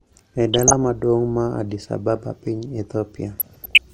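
Burbling breaks over the speech from 0.42 to 0.90 s and again from 3.39 to 3.79 s. This is DAB burbling: weak reception lets bit errors, under one percent, slip past error correction into the MP2 data, so wrong samples put short blips of noise into single sub-bands.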